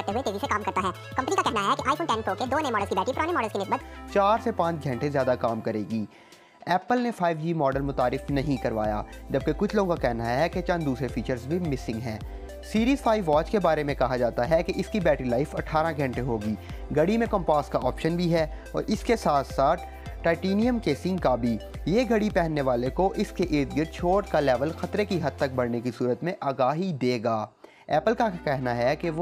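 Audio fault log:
0.00–3.80 s, section at the wrong speed: the opening plays 1.67 times fast, so pitch rises about ten semitones and everything sounds hurried, likely from resampling to the wrong clock. A spectrogram shows harmonics spread upward, stepping down at 3.80 s; the waveform looks squeezed.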